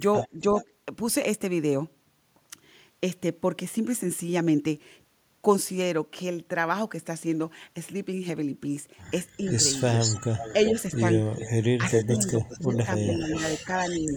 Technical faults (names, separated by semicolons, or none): echo leak; speech suppressed in double talk